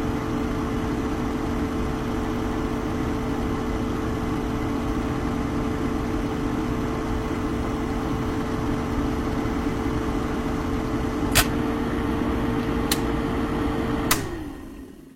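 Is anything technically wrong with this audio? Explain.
Yes. From 2.28 to 2.56 s there are repeated frames: a block of about 0.28 s of compressed audio was written or sent twice, so the decoder plays that stretch a second time. It is heard as a stutter where the same fraction of a second comes round again, and the clip runs about 279 ms longer than it should. The six-frame block fits a frame size of roughly 46 ms. On a spectrogram or waveform, the segment from 2.28 to 2.56 s appears twice in a row.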